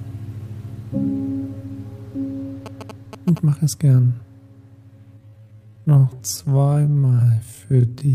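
From 2.66 to 3.38 s, GSM signalling bursts intrude. A nearby phone's radio pulses are rectified into a galloping dit-dit-dit of short 217 Hz buzzes, roughly 10 dB below the sound.

From 5.15 s to the end, a time-stretched section slows the pace to 0.54 times while pitch holds. Repeated short pieces are the likely cause, leaving it dragging.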